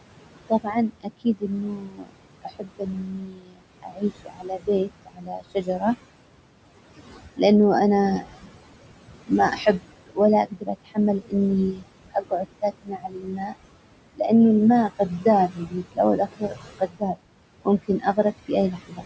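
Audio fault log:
Throughout, noise suppressor artifacts: the suppressor pulls down every band it judges to be steady noise by about 21 dB, frame by frame. The room noise, about 12 dB under the speech, sinks in pauses and comes back beneath the talking, so the background pumps with the speech.
0.48–5.83 s, 9.26–11.34 s, 11.73–13.54 s (ending just before "لانه الماء"), 14.99–17.16 s (starting just after "لانه الماء"), 17.65–19.05 s, speech cut by the noise suppressor: quieter parts of the speech were mistaken for noise and dropped by about 20–22 dB. That covers roughly 4 s in the first span and well under a second in each later one, so those parts sound swallowed or faint.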